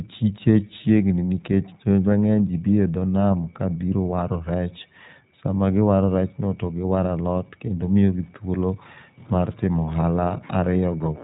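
From start to finish, the speech carries the marks of the iLBC codec. Nothing above 3.8 kHz survives, so the sound is narrowband and muffled, like a phone call. Each short frame is coded on its own, without leaning on the one before. The damage is plainly audible. Voices turn slightly rough and synthetic. The grain fits iLBC's 20 ms frame mode at its higher bitrate.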